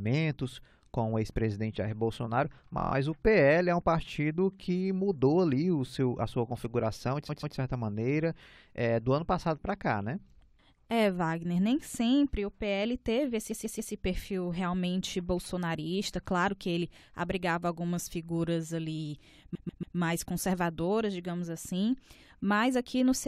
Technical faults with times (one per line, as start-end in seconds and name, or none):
2.78-2.91 repeated frames
7.28-7.56 repeated frames
13.50-13.92 repeated frames
19.54-19.96 repeated frames